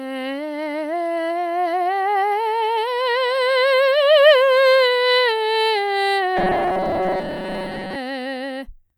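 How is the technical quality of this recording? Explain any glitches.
The music holds up until a robotic sound from repeated short buffers takes over between 6.37 and 7.96 s. The likely cause is audio arriving too slowly, so the playback fills gaps by looping the last tiny slice, about half of what you hear there, while real material gets skipped. Those repeats stamp a fixed buzz at 188 Hz onto everything, which fits a buffer of roughly 5.3 ms, giving a stiff metallic drone that only loosely tracks the music.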